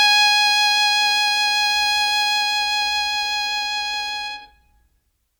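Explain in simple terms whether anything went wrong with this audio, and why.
Nothing went wrong with this music, since no fault can be heard anywhere in it.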